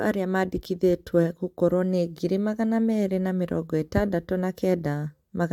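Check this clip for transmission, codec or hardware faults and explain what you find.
No transmission, codec or hardware faults are audible in this speech recording.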